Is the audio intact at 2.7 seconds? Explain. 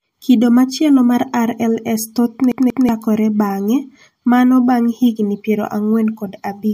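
No. At 2.7 s the clip is caught in a CD stuck on one turn, from 2.52 to 2.89 s. The laser jumps back to the same spot, so a 185 ms slice of speech plays twice, with a brief mute at each jump, giving a quick, even stutter.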